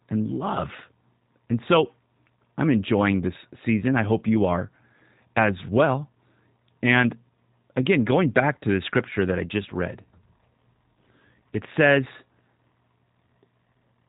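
The speech runs through G.729 coding for its whole length, and the damage is plainly audible. Nothing above 4 kHz survives, and each sound is rebuilt from a vocal tract filter, a pitch predictor and a few pulses per frame, leaving a rough, slightly synthetic buzz that fits an 8 kbit/s VoIP codec. A simple telephone low-pass would only dull the sound. Here the excitation itself is replaced, so the grain stays in every voiced stretch.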